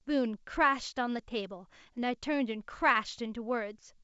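No technical faults can be heard in this speech, which carries the full wideband telephone range up to about 7 kHz typical of G.722 coding at its top 64 kbit/s rate, with at most a faint trace of the codec in the upper band.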